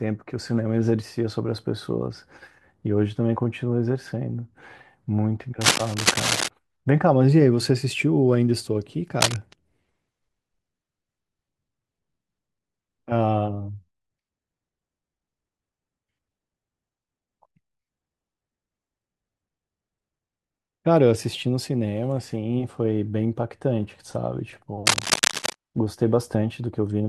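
A worn cable or connector being moved is the likely cause of cable scratch noise at 5.61–6.49 s, 9.21–9.36 s and 24.86–25.54 s: ragged scratching bursts roughly as loud as the speech.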